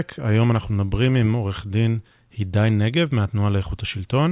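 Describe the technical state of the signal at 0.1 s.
The signal at 0.1 s is intact, with no technical fault present at that moment.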